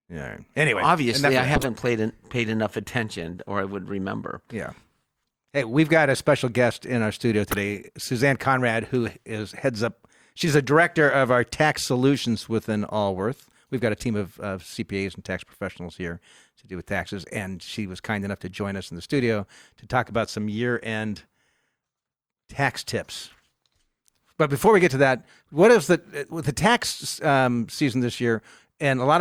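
A speech clip with three corrupt frames decoded. Each one is a short chirp or burst of noise. The first runs from 1.55 to 1.64 s, after "obviously I". It is the loudest, peaking near -5 dBFS. The second, from 7.49 to 7.57 s after "guest in our studio", reaches about -10 dBFS. The third, from 10.49 to 10.52 s before "a director of our", is about -15 dBFS. Each sounds like a few damaged compressed frames played anyway, with misread data putting energy at the wrong frequencies.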